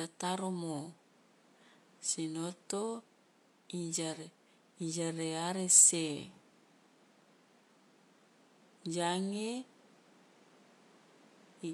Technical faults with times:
8.86 electrical switching spike

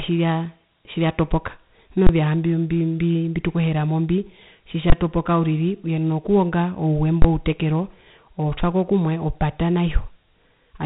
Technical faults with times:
0.00-10.86 Dialogic VOX ADPCM
2.07-2.09 invalid numbers at full scale
4.90-4.92 invalid numbers at full scale
7.22-7.24 invalid numbers at full scale

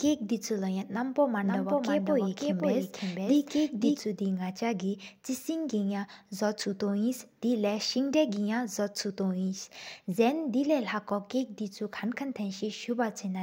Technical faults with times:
1.38-4.00 doubled audio track

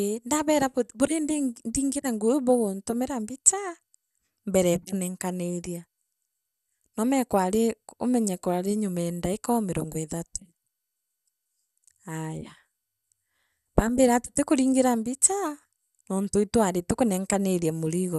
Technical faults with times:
0.00-18.18 MP2 compression

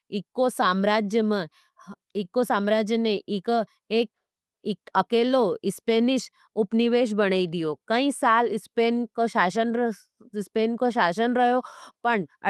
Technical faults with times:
0.00-12.50 clock drift between sender and receiver
0.04-12.39 repeated timing corrections

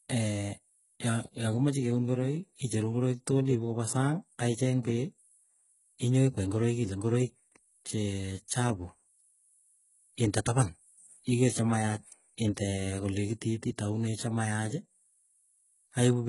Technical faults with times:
0.00-16.29 HE-AAC compression

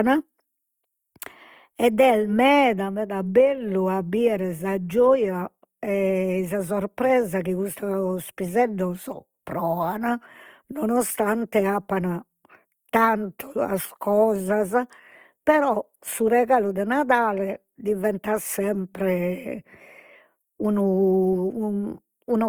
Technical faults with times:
0.00-22.49 Opus compression

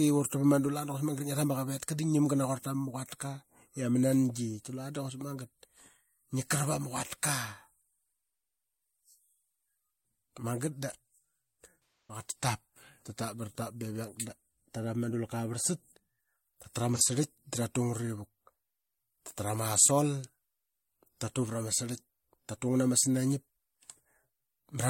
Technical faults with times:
12.07-12.23 AAC frame loss with concealment
16.95-17.02 AAC frame loss with concealment

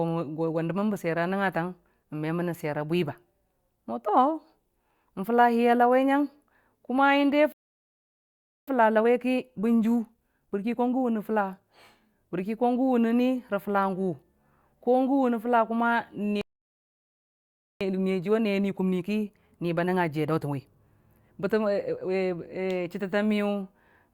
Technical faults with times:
7.52-8.68 playback stall
8.68-11.68 time-compressed catch-up
16.41-17.81 playback stall
17.81-20.81 time-compressed catch-up

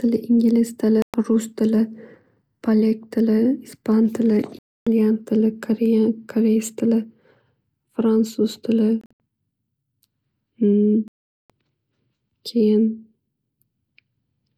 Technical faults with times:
1.02-1.14 Bluetooth dropout
4.59-4.87 Bluetooth dropout
9.01-9.20 Bluetooth dropout
11.08-11.50 Bluetooth dropout

